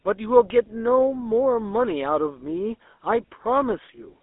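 From start to finish the speech carries a GSM full-rate codec: a buzzy, gravelly roughness from excitation built out of regularly spaced pulses, plainly audible here, with the band squeezed to roughly 250 Hz to 3.6 kHz, which fits the old 13 kbps full-rate coder.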